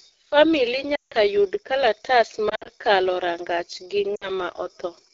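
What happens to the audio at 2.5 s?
From 2.49 to 2.69 s, lost AMR speech frames: radio errors corrupted several frames, roughly 100 ms of the speech across a 160 ms stretch, which fits five 20 ms frames. The longest unbroken gap is 60 ms. The decoder filled each gap by repeating its last good pitch and vocal tract settings at falling gain. The result is brief dips and a warbly, smeared patch that fades quickly, with the speech returning weak or rough for a moment.

Throughout this stretch, as elsewhere, the AMR wideband (HD Voice) codec runs at its second-lowest rate, 8.85 kbit/s. At that rate the speech model leaves the sound plainly rough and raspy, with the band above 6.4 kHz filled in by shaped noise.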